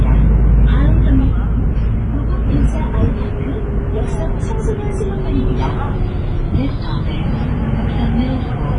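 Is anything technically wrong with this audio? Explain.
Yes. Throughout, the sounds are heavily damaged by what is likely WMA compression, consistent with a bitrate near 24 kbps. Long transform blocks spread quantisation noise over tens of milliseconds, so sounds ring and wash, with hiss swelling and fading with them, and nothing remains above 10.6 kHz. That breathing, smeared noise sets it apart from a simple low-pass filter, which would only dull the top end cleanly.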